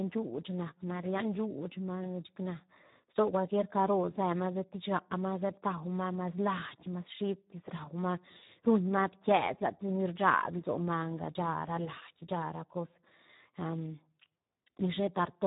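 Speech throughout, coded with the Speex codec at a very low setting, so the damage is heavy and runs the whole length. With so few bits left for the excitation signal, the voice comes out hoarse and grainy, which fits a bitrate of around 8 kbps. Nothing is present above 3.8 kHz; the narrow band removes the crispness from sibilants and consonants and gives the dull, boxed-in sound of old VoIP.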